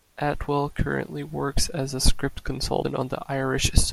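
Speech clip with a brief glitch from 2.82 to 2.85 s, where the sound skips abruptly. This is likely a broken MP3 bit reservoir: after frames went missing, a frame read another frame's leftover bytes, corrupting roughly one 24 ms frame. On a spectrogram it shows as a thin vertical disruption, and on the waveform as a sudden discontinuity.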